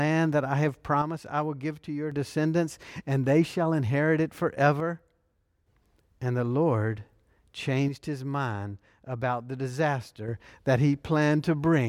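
One channel drops out three times: from 1.02 to 2.12 s, after "that I have" and before "descendants and they shall"; from 4.80 to 5.67 s, after "they shall inherit it"; and from 7.88 to 10.28 s. Each time the speech abruptly falls about 6 dB, likely because one stereo channel went silent before the mono sum.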